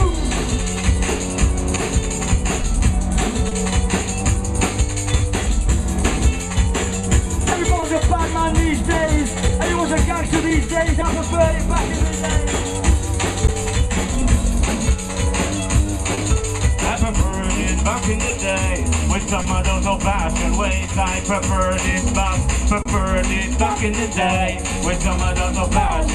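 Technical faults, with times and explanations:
Throughout: clock drift between sender and receiver. The sending end's clock runs roughly one percent slow, so the receiver's buffer keeps draining. It stretches or repeats short slices to keep playing, and small timing hiccups recur at uneven intervals across the whole clip.
1.75–5.21 s: scattered short gaps. About four packets arrived late or went missing, none longer than a couple of hundredths of a second. Each hole was bridged by extending the preceding sound, leaving brief ticks or smeared moments in otherwise continuous audio.
7.01–16.19 s: scattered short gaps. Around ten small losses occur across this stretch, the longest about 30 ms. The receiver covered each by carrying the previous sound forward, so short hiccups and slight smears appear at irregular points rather than audible silences.
18.29–22.87 s: scattered short gaps. Roughly five packets were lost or late here, each lasting a few tens of milliseconds at most. 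Concealment continued the last sound through every hole, so the listener hears isolated ticks or brief blurring instead of dropouts.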